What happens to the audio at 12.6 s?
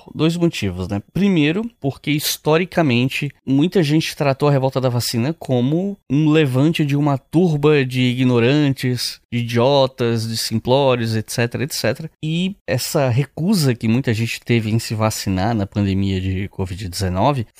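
Nothing goes wrong at 12.6 s; the speech carries on intact through that moment.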